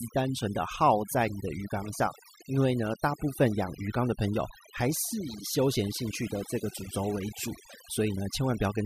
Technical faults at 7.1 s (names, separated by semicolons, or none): overdone noise removal